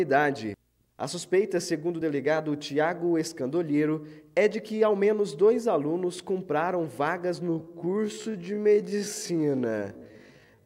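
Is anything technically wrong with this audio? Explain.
Yes. From 7.38 s to the end, the audio suddenly drags at unchanged pitch, a time-stretched section likely slowed to 0.526× speed by repeating short pieces.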